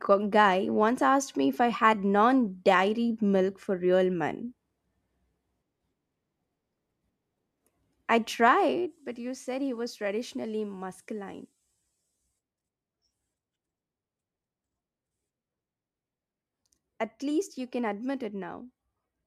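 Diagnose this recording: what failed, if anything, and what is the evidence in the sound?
Zipper noise, introduced at the driver or buffer stage where gain is applied. From 8.30 to 9.06 s the speech level falls by roughly 10 dB in unsmoothed 2 dB steps, about seven per second. Each step leaves a small click, producing audible ticking during the drop.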